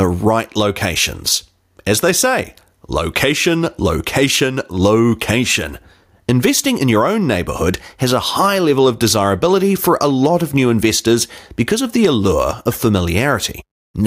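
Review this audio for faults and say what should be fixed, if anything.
The gain swings throughout by around 10 dB, leaving the speech squashed and flat in level. That is gain pumping, likely from input gain set far too high with a fast limiter or compressor clamping each peak. To prevent it, lower the microphone gain so peaks sit below the limiter threshold, and use slower, gentler compression if any is needed.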